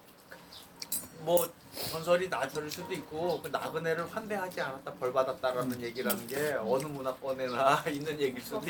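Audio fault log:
2.55–2.57 s, skip ahead: the sound jumps forward with no fill and no audible gap, so roughly 0.7 s of material is simply absent and the audio on either side of the cut is spliced almost directly. This happens when a stretch of audio is dropped, in transit or by an overflowing jitter buffer, while later audio is already queued. Playback continues from the newer material, which pulls the delay down by about the same amount.
3.05–3.43 s and 3.83–5.19 s, jitter buffer speed-up: in both stretches the audio plays faster at unchanged pitch, at 109% in the first and 105% in the second, so it sounds hurried and its timing feels compressed. The buffer was holding more audio than its target. To shed the excess delay, the receiver repeatedly cut out short pieces one or a few pitch periods long, removing roughly 40 ms in the first run and roughly 70 ms in the second.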